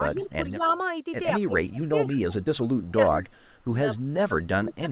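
The speech dips from 0.01 to 0.62 s by around 10 dB, then at 1.45 to 2.13 s by about 20 dB, at 2.93 to 3.29 s by about 15 dB, and from 3.98 s to the end by about 25 dB. This is speech suppressed in double talk, likely an echo canceller turning the talker down along with the far side. Unlike echo, it removes level rather than adding sound.

Between these dips, faint delayed copies of the speech trail in at 0.61 to 0.74 s, 2.13 to 2.44 s, 2.81 to 2.92 s and 3.32 to 3.51 s. They are always 136 ms late and sit well below the speech, loudest at 2.13 s. This is echo leak, likely loudspeaker pickup the canceller missed. It adds a lagging ghost rather than taking level away. Throughout, the call path keeps nothing above 4 kHz.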